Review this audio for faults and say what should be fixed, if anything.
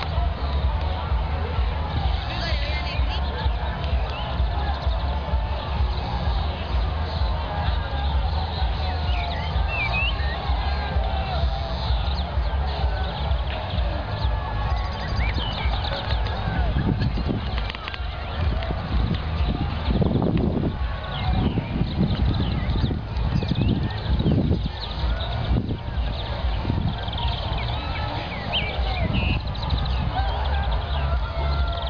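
No audible faults; nothing needs fixing.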